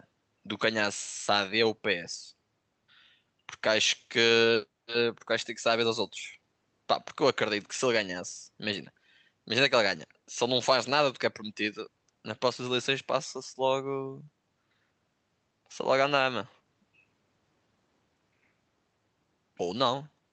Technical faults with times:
none

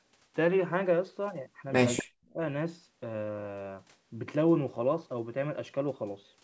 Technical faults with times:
1.97-2.03 echo leak
2.02-2.39 speech suppressed in double talk

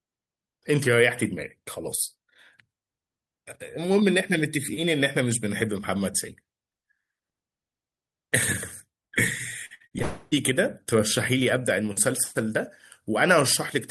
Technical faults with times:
9.65-10.02 repeated packet loss (robotic sound)
10.02-10.33 long network dropout

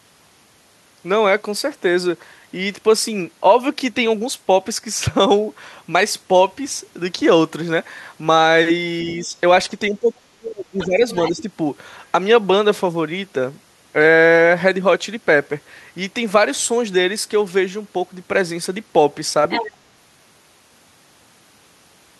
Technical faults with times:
9.05-9.35 speech suppressed in double talk
9.90-11.04 speech suppressed in double talk
10.79-11.30 other side's voice leaking through
11.32-11.48 speech suppressed in double talk
19.49-19.75 other side's voice leaking through

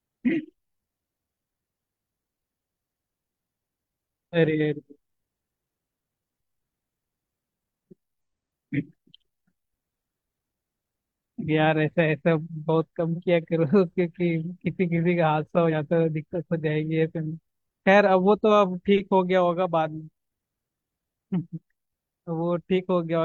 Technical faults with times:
8.21 damaged data in a compressed stream
11.37-11.43 damaged data in a compressed stream
15.68-15.72 damaged data in a compressed stream
18.03-18.08 damaged data in a compressed stream

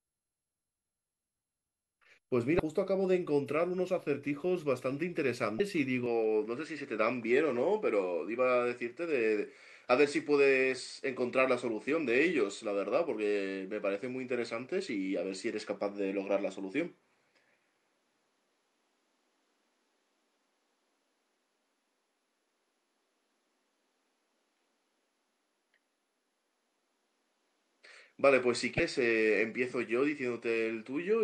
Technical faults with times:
2.56-2.60 damaged data in a compressed stream
5.57-5.60 damaged data in a compressed stream
6.06-31.23 input switched to a poorer device
28.76-28.80 damaged data in a compressed stream

